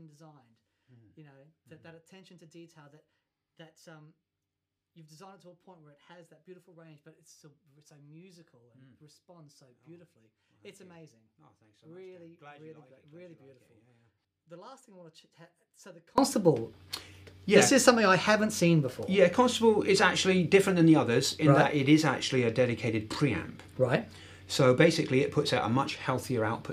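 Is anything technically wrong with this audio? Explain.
Yes. From 0.0 to 16.18 s the audio shows one channel inverted, most likely: when the channels are summed to mono, the material common to both cancels, and the level falls by about 29 dB. What remains is a faint residue of whatever differs between left and right. A plain dropout or gain drop would lower everything evenly; here the content common to both channels vanishes and only the small mismatch between them is left, which points to reversed polarity rather than lost signal.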